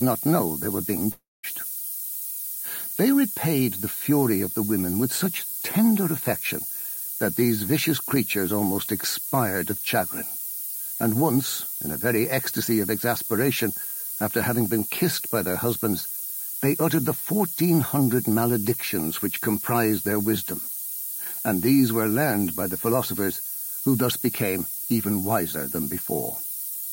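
Low bit depth with noise shaping runs throughout: the coarse quantisation, consistent with about 5 bits, pushes its error upward, giving a steady, thin hiss nearly as loud as the signal and rising toward the top.

From 1.11 to 1.45 s the sound breaks into a fading buzz, then silence, before resuming with roughly 0.3 s missing, likely a long network dropout concealed by the receiver.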